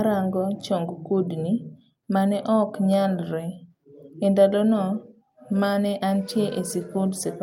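At 5.26 s the call's bandwidth estimate collapses and the encoder is told to drop from 64 kbps to 22 kbps, a call bitrate drop that lasts to the end of the clip at 7.42 s, with the lowest rate held for about 1.24 s. With so few bits the Opus coder quantises far more coarsely and trims the top of the spectrum, so the speech turns muffled, rough and watery, losing its crisp consonant detail.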